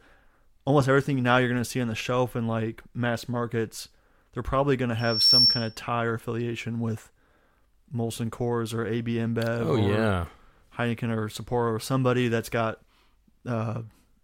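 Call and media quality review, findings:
Loudspeaker feedback squeal, 4.99 to 5.77 s, after "they're probably going to" and before "tie or affiliation with". A single 5.4 kHz tone swells over about a third of a second to roughly 10 dB above the speech, then stops. Component: microphone and loudspeaker on the same path. Mechanism: the mic picks up its own loudspeaker output. Loop gain exceeds unity at 5.4 kHz, so that tone grows on its own until the loop is broken.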